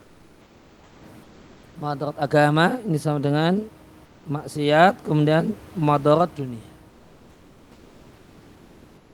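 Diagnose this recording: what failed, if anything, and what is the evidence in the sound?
Comfort noise in place of the background, at 0.00–0.97 s, 1.27–1.75 s, 4.09–4.21 s (between "agama ini sama dengan" and "maksiat kemudian madarat dunia") and from 6.91 s to the end. In these pauses the room noise gives way to a flat, featureless hiss about 6, 2, 3 and 3 dB quieter. This is a codec-stage effect, likely Opus discontinuous transmission: the sender stops coding during pauses, and the receiver synthesises a rough stand-in for the background.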